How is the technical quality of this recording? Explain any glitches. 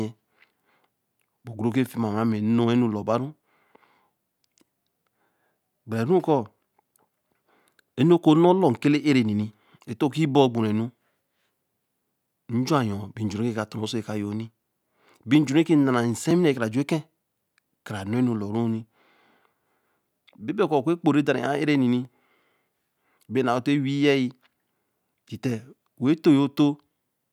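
The recording has two brief dropouts where the sound falls to digital silence.

At 16.31 s and 22.05 s there is a block of digital silence, about 2.2 ms and 0.7 ms long. The second fits a 32-sample block. The output buffer likely went unfilled, so the samples became zeros with no fade, and the abrupt edges make each gap heard as a tick in the speech. Unlike an added spike or crackle, the waveform drops to silence and then resumes.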